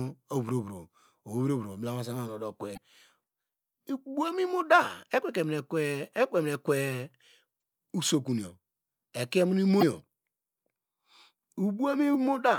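Damaged data in a compressed stream breaks the speech four times, at 2.73 to 2.78 s, 7.59 to 7.62 s, 9.79 to 9.83 s and 12.11 to 12.15 s. Corrupted bytes in the coded frames leave the decoder misreading them and losing sync until it locks onto a later frame header. Each spot lasts only a few hundredths of a second and is heard as a brief chirp, squawk, click or short hole cutting across the voice.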